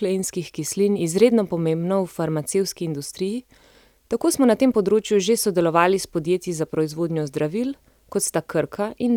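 Speech recording with no audible technical faults.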